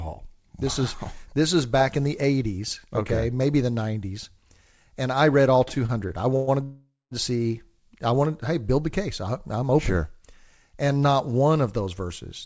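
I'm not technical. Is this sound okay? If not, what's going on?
No. From 5.68 to 6.49 s the speech catches and drags six times, stretching the passage. These are repeated stalls (stutter): audio packets arrived late, so the player kept stretching the last sound to cover about 0.21 s in total. Nothing is lost.

From 6.63 to 7.13 s the sound hangs, fades, then goes silent for about 0.2 s before resuming where it stopped. This call audio freeze likely came from packets being held up. Nothing is lost, but everything after it comes half a second late.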